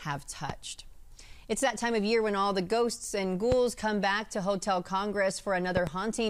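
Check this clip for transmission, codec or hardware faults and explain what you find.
The clip has one fault type, a loud pop, at three points: 0.50–0.52 s, 3.52–3.54 s, and a double pop at 5.77–5.89 s. Each is a sharp thump about 10 to 15 dB above the sound, which continues underneath. The cause is likely a voltage step from a plug, switch, static discharge or driver glitch.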